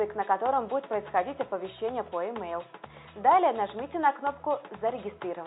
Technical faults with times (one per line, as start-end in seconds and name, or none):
none